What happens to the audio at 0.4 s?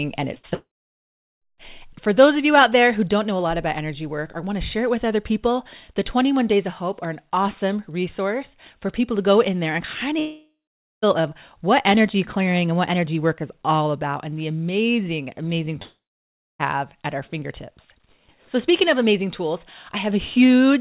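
At 0.4 s there is a burst of packet loss, from 0.38 to 0.45 s. About 60 ms of the call arrived too late or not at all. The receiver kept the last sound going and let it fade, so the audio is held and sinks away. It then picks up further on, and the sound in the gap is simply gone.

Short concealed packet loss sits on either side of it. The first runs from 0.34 to 0.38 s and leads straight into the burst. The second runs from 0.49 to 0.54 s. Each time about 20 ms went missing, and the receiver patched it by extending the previous sound before blending back. These patches come through as a quick smear or wobble. Everything is heard through the narrow G.711 call band, which has nothing above 4 kHz.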